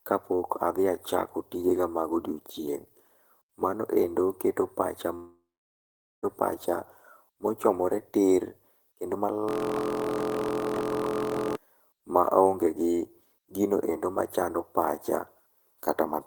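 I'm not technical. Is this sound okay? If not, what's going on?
No. From 5.15 to 6.25 s, after "endo keto pacha", about a second of speech is missing, then smeared buzz and silence. This is likely a long network dropout.

From 9.49 to 11.56 s, between "mochomore tir kendo" and "maonge gi", a system hang loop repeats a 23 ms scrap, making a steady 43 Hz buzz. This fits a 1024-sample buffer.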